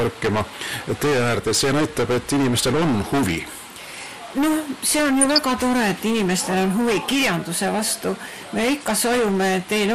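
Heavy hard clipping runs through the whole clip: the signal is driven about 18 dB past the level the chain can carry, so nearly a third of the waveform is sheared flat against the ceiling. Those squared-off tops throw dense harmonics high into the spectrum, which is why every loud moment comes out as a harsh, continuous fuzz rather than occasional crackle on isolated peaks. Over the whole duration there is also a dull, gurgling, granular texture, most likely from MP2 compression. Layer II divides the audio into 32 equal sub-bands and shares out a fixed bit budget among them. When bits run short, upper bands drop out and flicker in and out while the remaining bands are coarsely quantised. The damage is plainly audible and fits a low rate of around 80 kbps. From 5.21 to 5.39 s a short burst of DAB burbling sits on top of the programme as brief blips of noise. A low rate of bit errors has slipped through error correction into the MP2 data, corrupting samples so that short blips of noise appear in single sub-bands, across 8 frames.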